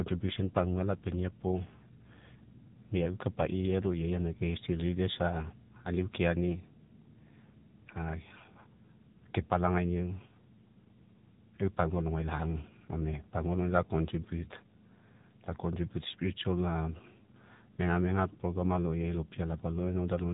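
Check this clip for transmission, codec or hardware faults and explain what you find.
The speech has one fault, present for the whole clip: AMR narrowband mobile codec damage, plainly audible. Everything passes through 8 kHz sampling, so nothing survives above 4 kHz; a spectrogram shows a hard ceiling there. The vocal-tract model rebuilds the voice from a few pulses per 5 ms subframe, giving a buzzy, synthetic quality consistent with a 7.4 kbps mode.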